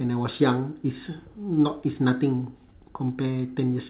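No faults to report: the speech runs over a call path with nothing above 4 kHz, a narrowband ceiling that fits a G.711 mu-law link at 64 kbps.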